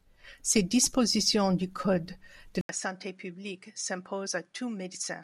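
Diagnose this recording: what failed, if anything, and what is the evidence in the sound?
At 2.61 s the speech breaks for 80 ms. It resumes duller and about 10 dB quieter, and stays that way to the end. From there nothing is present above 11 kHz. A new noise floor sits well below the speech. These changes point to the capture stage, most likely the input switched to a poorer device. A different microphone passes a narrower band and brings its own gain and background noise. The gap marks the handover.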